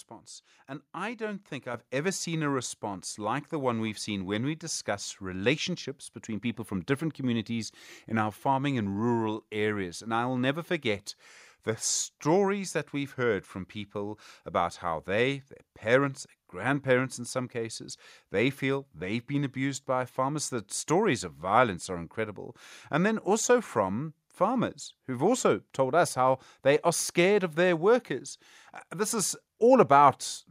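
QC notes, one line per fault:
1.74 s, microphone volume stepped up: between "I don't think" and "ever seen a response", voice and background jump about 7 dB together; waveform envelope steps up sharply.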